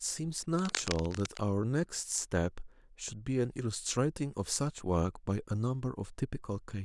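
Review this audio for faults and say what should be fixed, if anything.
From 0.59 to 1.39 s, cable scratch noise sits over the speech: dense, irregular bursts of crackle and rustle, only a few decibels below the speech level. This is likely a worn cable or connector being moved, its contact resistance fluctuating. Replace or reseat suspect cables and secure them so they cannot shift during recording.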